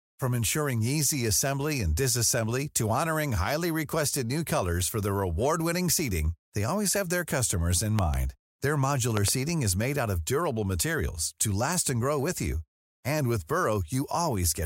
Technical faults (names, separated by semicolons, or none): loud pop